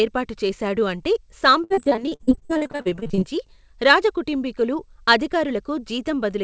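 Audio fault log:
1.64–3.24 s, repeated packet loss (robotic sound): after "ఏర్పాటు చేశాడు అంటే", packets kept dropping in gaps up to 60 ms, and nearly half the stretch was patched by stretching the last sound, leaving choppy, robotic speech.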